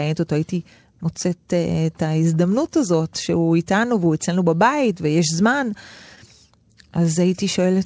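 A speech clip, band-limited to nothing above 8 kHz by its wideband call codec, with small hiccups and a faintly dragging, uneven tempo throughout. This points to clock drift between sender and receiver: the sender's clock runs roughly 3% slow, so the receiver's jitter buffer keeps running low and must be topped up at irregular moments. Those top-ups are repeated timing corrections from 0.04 s to 7.61 s, each repeating a short piece so the speech plays at about 98% speed and gains about a fifth of a second overall, heard as slight stutters at uneven intervals.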